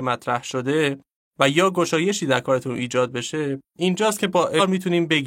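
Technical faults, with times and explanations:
4.55–4.61 s: damaged data in the compressed stream, heard as a brief glitch as the decoder misreads corrupted frames, loses sync and searches for the next valid header.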